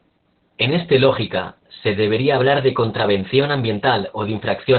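From start to finish the speech carries heavy Opus voice compression. Nothing survives above about 4.3 kHz, and the coarsely coded excitation makes it hoarse and faintly robotic, not just muffled as a plain low-pass filter would, which fits narrowband SILK at roughly 8 kbps.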